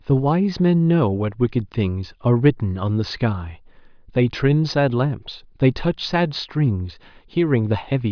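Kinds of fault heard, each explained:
Nothing's wrong here: the speech runs without any dropouts, glitches or other faults to pick out.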